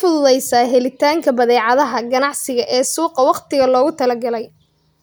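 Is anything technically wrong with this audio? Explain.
No, nothing in this speech recording stood out as technically wrong on listening.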